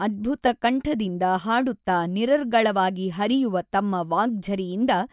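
No technical faults can be heard anywhere in the speech.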